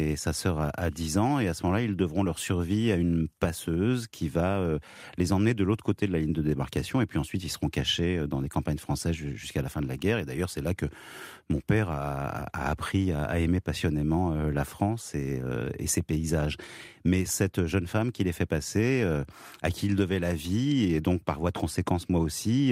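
No technical faults can be heard anywhere in the speech recording, from its opening moment to its close.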